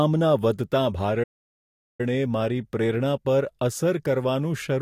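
At 1.23 s the speech cuts out abruptly and the output stays silent until 2.01 s, a gap of about 0.76 s. This is a playback stall. The likely cause is the player running out of buffered data, or its playback thread being blocked, so nothing reached the output. When audio resumes, the speech carries on after the break. The gap sounds like a dead pause dropped into the middle of the flow.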